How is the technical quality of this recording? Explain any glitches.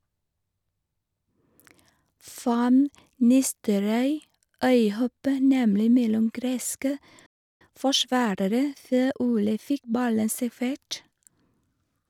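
There are two linked glitches, both right after "nemlig mellom greske". At 7.26 s there's a playback stall: the speech just stops dead for about 0.34 s, most likely because the player ran dry or got blocked, then carries on. From 7.61 to 9.89 s you get time-compressed catch-up, where the player trims and cross-fades tiny slices to clear its backlog, so the speech runs about 1.15 times fast at normal pitch.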